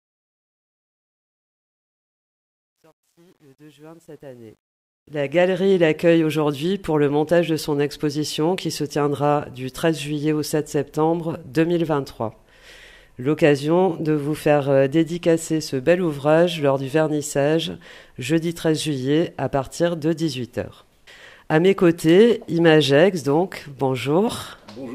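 From 0.0 to 5.72 s, the fade-in shows truncation distortion. Without dither, it sounds gritty, worst until 4.54 s, consistent with roughly 10-bit resolution.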